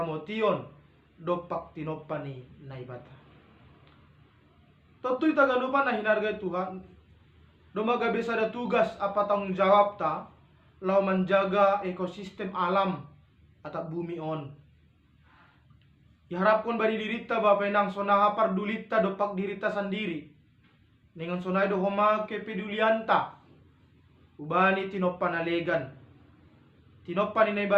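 No technical faults can be heard anywhere in the audio.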